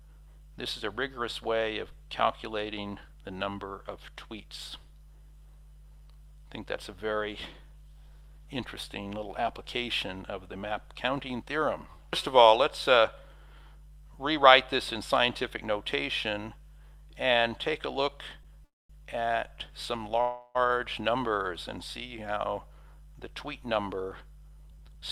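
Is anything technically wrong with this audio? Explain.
Yes. Two faults can be heard.

Mains hum runs through the whole clip. It is a steady low tone at 50 Hz, sitting roughly 20 dB below the wanted sound. Power-line current is getting into the signal path, typically through a ground loop or a nearby transformer. The hum never changes pitch or level, and it persists through quiet passages.

Call audio freeze occurs twice. From 18.65 to 18.91 s, the last sound is stretched for about 30 ms. It then falls to silence for about 220 ms before the audio resumes. From 20.21 to 20.57 s, a fading continuation fills about 335 ms with no silent stretch. The likely cause is delayed network packets emptying the jitter buffer, so the receiver padded the gap. Nothing is lost. The audio simply picks up where it stopped, now running later.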